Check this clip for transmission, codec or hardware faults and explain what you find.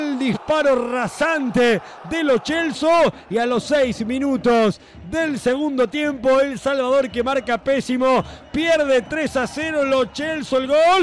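No transmission, codec or hardware faults are audible anywhere in this clip.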